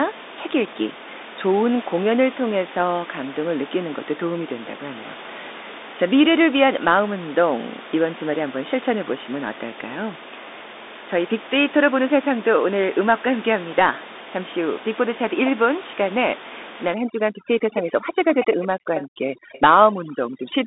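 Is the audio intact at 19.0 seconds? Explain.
No. At 19.0 s three faults overlap. Throughout the clip, the Bluetooth CVSD headset codec's one-bit, step-adapting encoding cuts everything above 3.8 kHz, makes sibilants scratchy and lays granular hiss under the speech. From 16.94 s to the end at 20.66 s, overdone noise removal pushes frequency bands near the noise floor down too hard, leaving a background that drops and breaks up into twinkling specks. From 18.28 s to 19.61 s, a faint delayed copy of the speech trails about 178 ms behind, roughly 15 dB down, likely an echo leak where the far side's echo canceller let loudspeaker pickup return.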